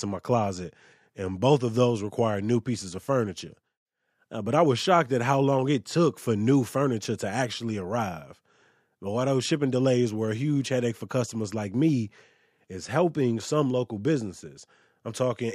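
Right after "shipping delays were a", at about 10.41 s, the speech picks up a rough, metallic edge that stays through to the end at 15.54 s. That's periodic clock jitter: something is wobbling the converter's sample clock at a steady rate of around 100 Hz. Each component of the voice gets sidebands at that spacing on either side, and the brighter, higher parts of the sound carry it most. It goes away in pauses.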